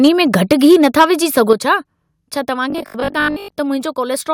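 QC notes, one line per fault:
0.04–1.05 s and 1.37–1.53 s, microphone overload: peaks driven about 5 dB, then about 2 dB, past the converter's limit, likely from excessive input gain. The waveform shows flat-topped peaks, and the spectrogram shows broadband crackle.
0.53 s, 1.53 s, 2.55 s, microphone volume stepped down: voice and background drop about 3, 6 and 2 dB in single steps, likely automatic gain reacting to a too-loud or clipping microphone. The waveform envelope shrinks abruptly.
2.70–3.52 s, robotic sound from repeated short buffers: a rigid metallic 50 Hz buzz, likely from chunks of about 20 ms repeating through roughly 70% of the span. The spectrogram shows harmonics every 50 Hz, and the waveform shows identical repeating cycles.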